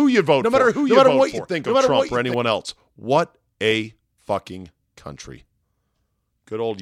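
A second, slower capture path or an out-of-step edit has likely mixed the same speech in twice, producing a doubled audio track from the start until 2.34 s: a dry, full-band copy trails around 0.7 s behind, roughly 5 dB quieter, and cuts off abruptly.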